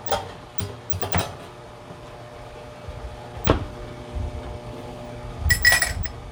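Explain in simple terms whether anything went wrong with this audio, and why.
Nothing went wrong; I hear no problems here.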